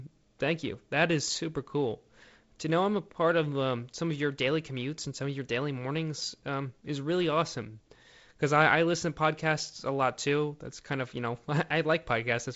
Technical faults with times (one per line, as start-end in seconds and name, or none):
none